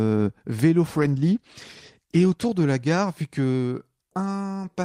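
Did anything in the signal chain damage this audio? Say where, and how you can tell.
Yes. A call bitrate drop affects the codec stage from 0.88 to 3.25 s. The speech turns rough and muffled as the highs vanish, which fits a fall from about 32 to 15 kbps. The encoder had fewer bits, so it coded coarsely, worst for 1.3 s.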